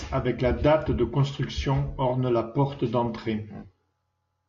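No technical faults can be heard anywhere in this recording.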